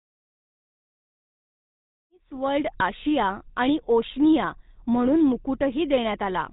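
GSM full-rate codec damage runs throughout this speech, plainly audible from the smooth fade-in around 2 s to 2.74 s onward. The codec rebuilds the vocal tract from a sparse pulse excitation and discards everything above 4 kHz, giving a buzzy, gravelly roughness consistent with a 13 kbps GSM stream.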